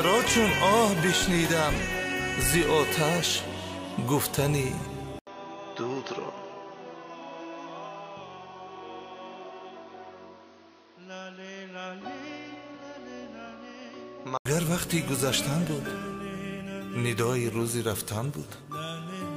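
From 5.19 s to 14.45 s the audio turns dull and boxy, with nothing above 6.4 kHz, drops a few decibels in level, and carries a different background noise well below the signal. It then clears again. An 80 ms silence opens the change. The likely cause is the input switching to a poorer device. A simple filter or bandwidth drop would not bring a new noise floor, a gap and a level shift together.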